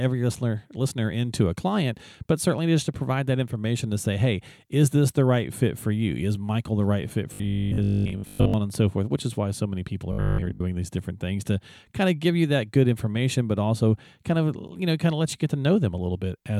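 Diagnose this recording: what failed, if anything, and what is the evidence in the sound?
Robotic sound from repeated short buffers occurs at 7.34 to 8.54 s, after "the right fit", and at 10.12 to 10.62 s, after "why so many people". A fixed 50 Hz buzz, fitting a repeated 20 ms block across most of each stretch, points to a likely driver or buffer underrun.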